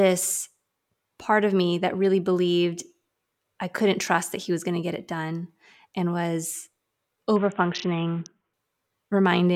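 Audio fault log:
7.36 to 8.53 s, Bluetooth SBC bit pool drop: the speech abruptly loses its treble and takes on a gritty, granular roughness, as if the link briefly starved. The sound points to the encoder cutting its bit pool from around 28 to about 5, near 54 kbps. The top sub-bands get few or no bits and the rest are coarsely quantised. A spectrogram shows the upper bands blanking out with speckled noise below; the waveform looks rougher, then both recover.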